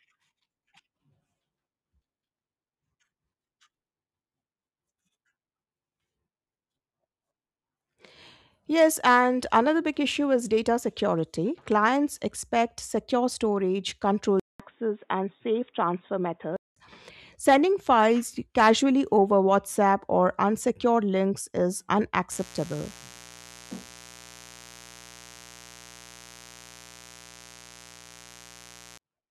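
A speech recording with two faults. From 14.40 to 16.76 s the band narrows abruptly, nothing above 3.8 kHz, after a 200 ms silence, likely an input switched to a poorer device. From 22.32 to 28.98 s a raspy 60 Hz mains buzz, about 25 dB below the speech, runs steadily with harmonics from switching spikes.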